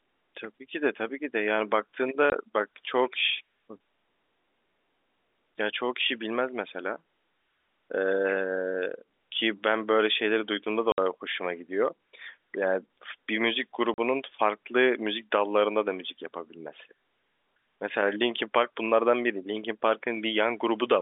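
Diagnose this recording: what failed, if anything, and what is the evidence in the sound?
The network dropped audio, and packet loss filled with silence is what you hear. The speech cuts out dead at 2.30–2.32 s (20 ms), 10.92–10.98 s (60 ms) and 13.94–13.98 s (40 ms), each hole with hard edges. Those gaps are all multiples of 20 ms, which fits a 20 ms packet size with runs of one, three and two losses. The receiver just zero-filled instead of concealing, over a G.711 telephone band that tops out near 3.6 kHz.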